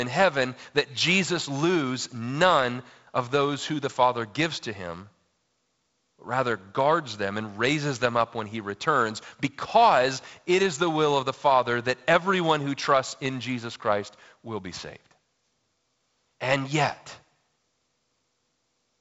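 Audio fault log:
No fault to log for this speech.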